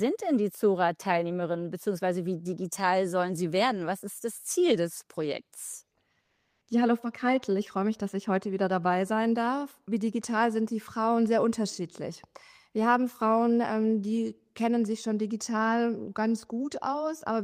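From 6.25 to 6.61 s, about 360 ms of the real background drops out and is replaced by comfort noise. The natural room tone, which sits about 52 dB below the loudest passages, gives way to a smooth, featureless hiss that shifts the level by about 2 dB. The likely cause is discontinuous transmission, consistent with Opus DTX: the sender judged the gap inactive and stopped sending, so the receiver synthesised rough-spectrum noise until the real signal resumed.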